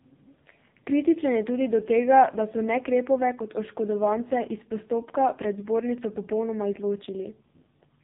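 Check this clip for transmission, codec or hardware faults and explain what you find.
The clip has one codec fault, present for the whole of the speech: AMR narrowband mobile codec damage. Everything above 3.8 kHz is gone, which on a spectrogram shows as a hard, flat ceiling with empty space above it. The codec models the vocal tract and excites it with a few pulses per 5 ms subframe. Here the damage is heavy, which fits its low 5.15 kbps mode, so the speech sounds muffled, buzzy and synthetic.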